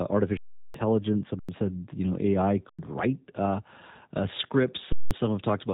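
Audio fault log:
throughout, G.729 codec: The speech has been squeezed through the G.729A codec at 8 kbit/s, and the damage is plainly audible. The codec rebuilds each 10 ms frame from a vocal-tract filter, a pitch predictor and a few pulses, which gives the speech a rough, slightly synthetic, buzzy texture. On a spectrogram the energy stops at a hard ceiling near 3.8 kHz. The harmonics look smeared and blocky from frame to frame.
0.37–0.74 s, 1.39–1.49 s, 2.69–2.79 s, 4.92–5.11 s, underrun with held sample: The output buffer ran dry four times, for about 372 ms, 93 ms, 93 ms and 186 ms. Each time the converter held its last value, so the sound cuts out abruptly with little click. Audio went missing during each gap, roughly 400, 100, 100 and 200 ms, so the speech resumes at a later point. The lengths suggest 4096-sample buffer blocks. On the waveform each gap is a flat line, and on a spectrogram it is an empty vertical band.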